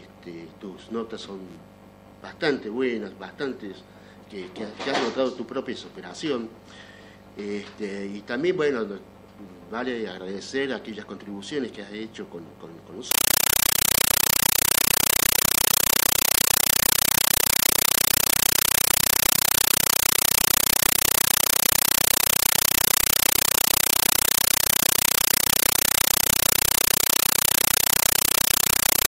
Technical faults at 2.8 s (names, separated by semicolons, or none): none